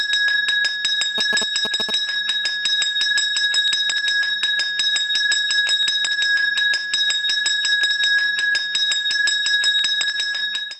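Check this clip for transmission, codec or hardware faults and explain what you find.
One fault is present. From 1.18 to 1.91 s there are GSM signalling bursts. A nearby 2G phone is signalling, and the audio circuit rectifies its radio pulses. The result is a galloping pattern of short buzzes at about 217 Hz, almost as loud as the audio.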